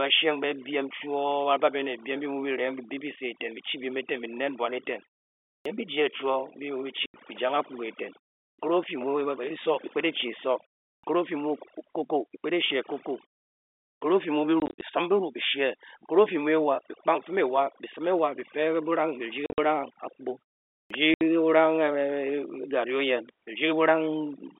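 Overdone noise removal runs through the whole recording. The suppressor pushes bands near its noise estimate almost to nothing, so the background becomes near silence dotted with twinkling specks. Unlike muted pauses, the damage also eats into the voice itself.

A clipped start after a pause comes at 5.59 s, right after "nen bwan eten", and again at 8.51 s after "jang akpuga eiten", then at 10.96, 13.94 and 20.83 s. Each follows a pause of 0.38 to 0.76 s, while the output device wakes, and swallows about 64 to 76 ms. Speech bursts in abruptly without its opening sounds.

Packet loss filled with silence cuts holes in running speech. There is a single 80 ms gap at 7.06 s, scattered gaps totalling 130 ms across 14.6 to 14.82 s, 100 ms across 19.46 to 19.58 s, and a 70 ms gap at 21.14 s. The lengths fit 10 ms packets.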